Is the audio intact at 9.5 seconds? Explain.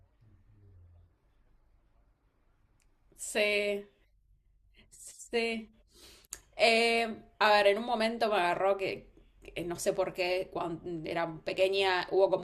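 Yes, the speech at 9.5 seconds plays through intact, with no dropout, click, distortion or other fault at that moment.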